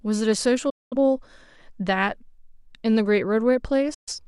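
The receiver lost its digital broadcast signal twice in this speech clip, muting it with a quick fade to silence from 0.70 to 0.97 s and from 3.94 to 4.13 s. That is digital broadcast dropout, and the speech during those gaps is gone.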